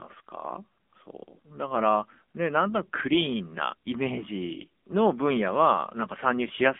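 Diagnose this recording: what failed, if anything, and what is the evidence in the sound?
Codec stage: an AMR narrowband mobile codec throughout, with nothing above 3.6 kHz, a 200 Hz to 3.5 kHz line band, and heavy buzzy synthetic coding, which fits a low 6.7 kbps mode.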